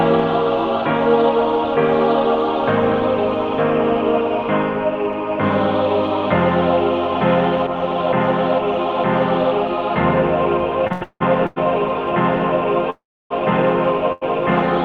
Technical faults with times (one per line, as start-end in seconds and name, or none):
10.87-11.58 repeated stalls (stutter)
12.90-13.32 call audio freeze
14.12-14.23 short stall from a late packet